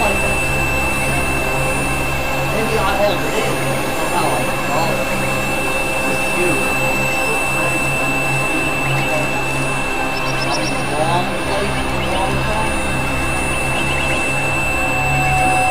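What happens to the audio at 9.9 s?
Nothing goes wrong at 9.9 s; the audio plays through that moment intact, with no dropout, click or other fault.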